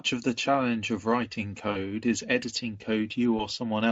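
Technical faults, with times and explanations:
1.71–1.78 s and 3.37–3.47 s, VoIP packet loss concealed by the speech codec: the Speex decoder stretches the last sound into a fading buzz or coloured noise, which fits two lost 20 ms frames, then one. Unlike a clean dropout, there's no silence, and the sound stays weak or distorted past each gap.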